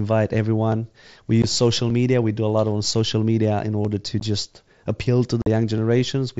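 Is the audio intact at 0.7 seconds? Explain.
No. At 0.72 s there is a single sharp click, most likely from dropped samples: a fraction of a millisecond of the stream goes missing, so the waveform leaps straight from one value to a later one instead of moving smoothly between them. Nothing audible is lost, only the jump is heard. On a waveform it shows as a sudden step; on a spectrogram, as a thin vertical line running up through the band the mSBC headset link passes.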